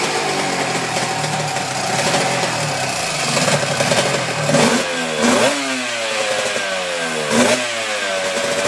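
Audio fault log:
No faults found; the audio shows no audible defects at any point.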